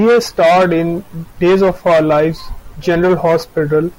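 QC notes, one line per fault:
No faults heard in playback.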